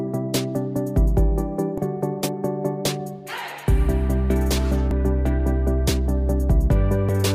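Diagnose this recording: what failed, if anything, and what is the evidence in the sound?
The codec stage failed, with damaged data in the compressed stream. Short glitches at 1.78–1.81, 4.91–4.94 and 7.09–7.12 s, each about 30 ms, are the decoder misreading corrupt frames and hunting for the next header.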